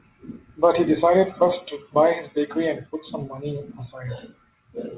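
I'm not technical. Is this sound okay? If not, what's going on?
Yes, there are no technical faults in this speech recording; it has come through an ordinary phone-style call connection, which is why nothing above about 4 kHz is present, and that's normal for this kind of call.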